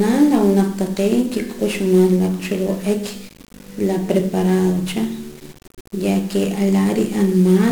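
From start to finish the speech is fuzzy and crackly, with strong broadband hiss burying the treble. This is 1-bit DFPWM compression: each sample keeps one bit that nudges an adaptive level up or down, and the heavy quantisation noise fits a rate near 48 kbps.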